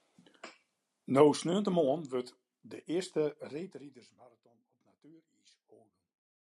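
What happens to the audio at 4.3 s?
At 4.3 s you're right at the tail of a burst of zipper noise, running from about 3.46 s to 4.39 s. The speech is being turned down by roughly 25 dB, but the gain moves in unsmoothed 1 dB jumps, around thirty a second, rather than gliding. Every jump puts a tiny click into the waveform, so the fade carries a fast ticking, zipping texture until the level settles just after 4.39 s.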